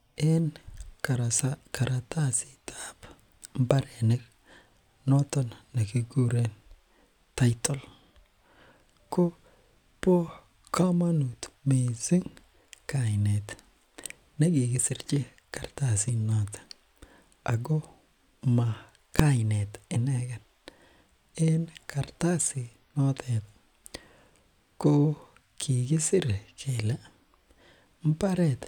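At 19.19 s, a calculation produced invalid numbers that were pinned at full scale for about 1.5 ms, consistent with a 64-sample block, giving one sharp, very loud bang.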